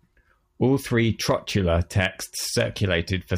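Nothing in the speech recording points to a technical problem: the signal holds steady, with no interruptions, level jumps or distortion anywhere in it.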